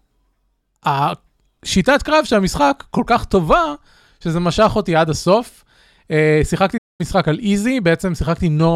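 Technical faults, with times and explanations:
6.77–7.01 s, playback stall: the speech halts mid-flow into dead silence for about 216 ms, then carries on. The likely cause is the player running short of buffered data, or its output thread being held up, so nothing reached the output until it recovered. Unlike a natural pause, the cut is abrupt and the silence total. Unlike a brief dropout of a few milliseconds, it lasts long enough to be heard as a hitch.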